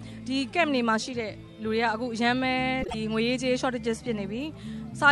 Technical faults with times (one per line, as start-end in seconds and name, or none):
2.82-2.95 frames out of order